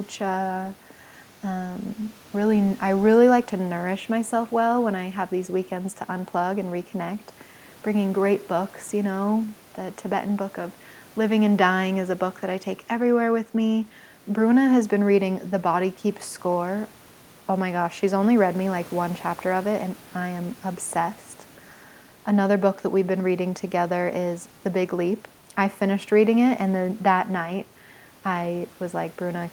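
No technical faults can be heard anywhere in the recording.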